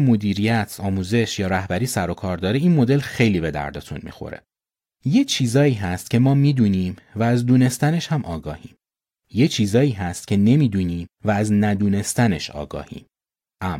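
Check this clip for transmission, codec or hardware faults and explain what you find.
Nothing in the speech points to a fault anywhere along its path. There is no event here to locate or explain.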